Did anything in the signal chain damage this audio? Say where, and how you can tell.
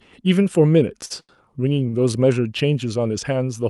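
Yes. At 1.05 to 1.12 s, 1.20 to 1.31 s and 1.89 to 1.95 s a sound hangs on with a faint buzz or dip, for 48, 86 and 43 ms. These are short stalls from a late packet. The jitter buffer emptied, so the receiver stretched the last sound and then resumed with nothing lost.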